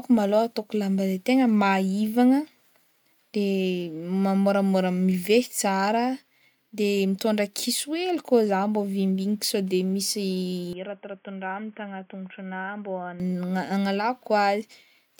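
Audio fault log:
10.73–13.20 s, input switched to a poorer device: the speech abruptly turns dull and boxy, with nothing above 3.4 kHz, a level drop of around 10 dB and a new background noise floor roughly 40 dB under the signal. There is no gap at either transition. This most likely comes from the recording path changing to a narrowband source such as a headset call profile, which brings its own bandwidth limit, gain and noise before the original input returns.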